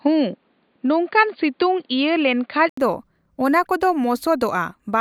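From the start of the speech to 2.77 s, the sound is narrowband and boxy, with nothing above 4.7 kHz. A short gap of 80 ms marks the transition at 2.77 s, after which the full bandwidth returns at much the same level. This is likely an input switched to a poorer device, such as a headset's call profile, which passes a narrower band and brings its own faint background noise, here sitting well below the speech.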